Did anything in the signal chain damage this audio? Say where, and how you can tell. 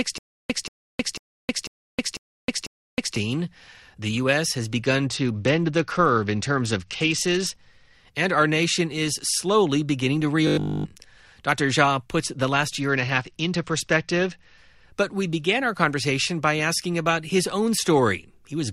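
Yes. Playback stage: from the start to 3.16 s, a stutter with silent gaps repeats one 0.18 s burst every 0.5 s, six times, with 0.31 s of flat digital silence between. The waveform shows identical blocks, likely from a stalled stream.

Bluetooth codec stage: an SBC bit pool drop at 5.06–7.59 s, after "has begun", and at 12.81–14.58 s, after "puts the last". The treble dulls and grit rises. The spectrogram's top band empties, which fits a bit pool falling from 28 to 9, near 78 kbps.

Buffer stage: at 10.47–10.85 s, after "is slowly beginning to", all of the sound becomes robotic from repeated short buffers. It turns into a rigid 50 Hz buzz. The spectrogram shows harmonics evenly spaced 50 Hz apart, which fits a 20 ms buffer that was likely replayed.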